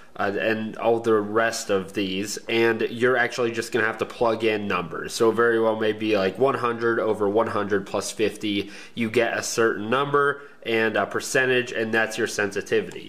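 Nothing in this clip stood out as a technical problem when listening.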